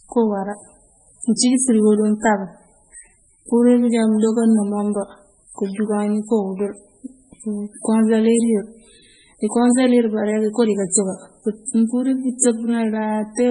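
MP3 compression damage runs throughout: heavy, watery, swirling artefacts and nothing above 10.5 kHz, likely from encoding at a very low bitrate, consistent with about 16 kbps.

Pre-echo appears from 1.36 to 1.40 s: quantisation noise spreads about 37 ms ahead of a sharp attack, producing a brief hiss that softens its onset.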